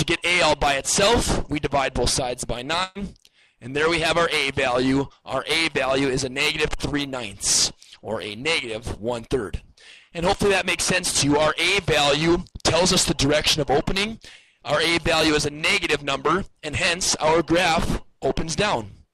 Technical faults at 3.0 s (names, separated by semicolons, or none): burst of packet loss